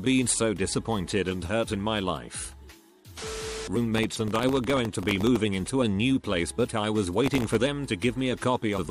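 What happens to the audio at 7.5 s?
At 7.5 s the audio is inside a burst of processor overload crackle running from 7.24 to 7.61 s. Dozens of very short buffers, each under a millisecond, miss their deadline and replay stale audio with hard edges, producing a gritty tearing over the sound.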